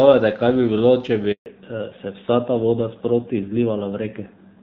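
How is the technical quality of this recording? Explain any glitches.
The recording is speech carried over a phone call, and it has two linked glitches around one network switch. Before it, the HD Voice link carries the full wideband speech with only light codec roughness.

Handover gap, 1.32 to 1.46 s: the call was passed from one network to another, and no speech frames arrived for about 140 ms. The voice fades within a few tens of milliseconds, then there is silence, and the speech in that stretch is lost.

Fallback to narrowband, 1.46 s to the end: after the switch the call drops from AMR-WB to an older narrowband codec, which fits a step down to around 7.4 kbit/s. Nothing above 4 kHz remains, so the voice sounds muffled, duller and rougher.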